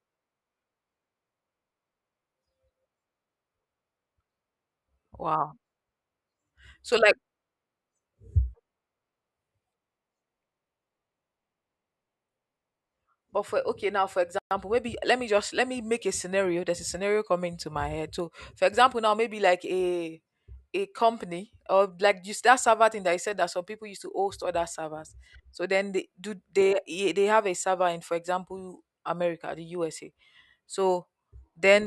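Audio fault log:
14.39–14.51 s, playback stall. The speech goes silent for 124 ms just after "now for", then resumes with "maybe let me just". The player likely ran short of data or was briefly blocked. Output halts mid-flow, then carries on.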